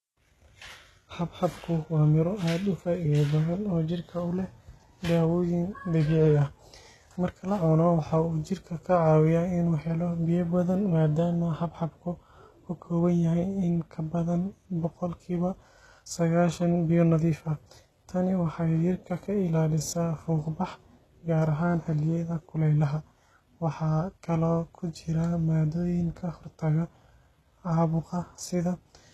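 From start to finish the speech carries HE-AAC compression damage, likely from a low bitrate near 16 kbps, with treble rebuilt by copying lower bands upward. S sounds come out gritty and lispy, and a spectrogram shows smeared, repeated high-band patterns that stop dead at about 12.3 kHz.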